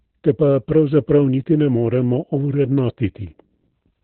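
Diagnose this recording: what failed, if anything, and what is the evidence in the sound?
Codec stage: Opus voice compression throughout. The speech is muffled and hoarse, with nothing above 4.2 kHz. This fits narrowband SILK at roughly 8 kbps.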